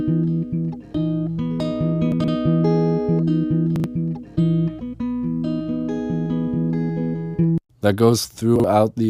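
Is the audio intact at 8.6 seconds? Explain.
No. Between 8.56 and 8.64 s there are chunks out of order. A 40 ms chunk plays one chunk late, after the one that should follow it. Nothing is missing, but the swap leaves three hard joins. It sounds like a brief jumbled moment.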